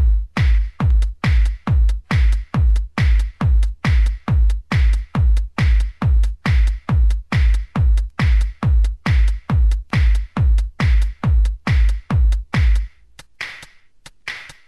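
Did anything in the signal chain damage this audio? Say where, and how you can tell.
No, nothing along the chain from capture to playback left an audible mark on this audio.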